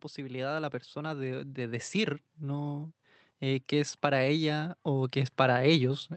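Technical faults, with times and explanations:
0.15 to 6.17 s, automatic gain rising: the gain control judged the input too quiet and kept easing its gain upward, so the speech and the background noise swell together gradually over nearly the whole clip rather than jumping at any one moment.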